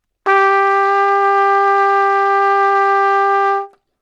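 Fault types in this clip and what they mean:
No technical faults can be heard in this clip. There is nothing here that calls for a fault explanation.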